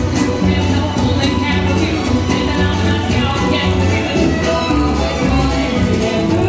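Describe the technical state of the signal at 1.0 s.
At 1.0 s the signal is intact, with no audible fault at that point.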